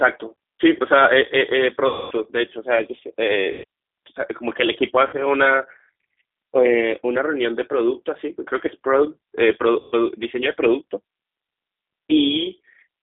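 The whole call runs through the G.729 codec at 8 kbit/s, which rebuilds speech from a filter, a pitch predictor and sparse pulses. The band is held to roughly 250 Hz to 3.6 kHz, and the speech sounds plainly rough and synthetic.

VoIP packet loss concealed by the speech codec hits at 1.87 to 2.13 s (240 ms lost), 3.52 to 3.64 s (120 ms), 5.07 to 5.17 s (60 ms) and 9.80 to 9.95 s (120 ms). The decoder extends its last pitch and filter state, so each gap becomes a fading buzzy tone or coloured noise. The speech stays weakened briefly after each one.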